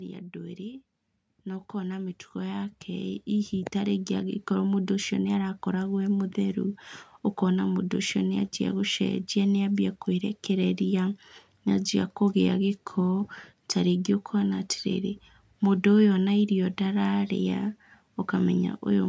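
From 0.33 s to 4.51 s, automatic gain rising: the gain control judged the input too quiet and ramped up by about 12 dB, so voice and background swell together.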